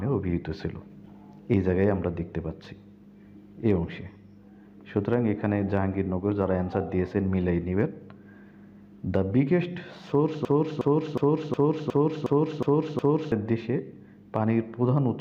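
At 10.45 s the audio catches on a short fragment and a broken-record loop begins. A piece about 363 ms long plays eight times in a row, identical each time, with no gap between repeats. It runs until 13.32 s, where normal sound resumes. The likely cause is a stall in the player, encoder or stream, which kept sending the last fragment it held. Whatever should have played during those seconds is gone.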